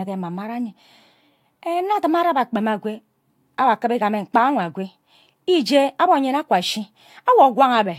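No technical faults can be heard anywhere in the speech recording. There are no events to place in time and nothing to describe.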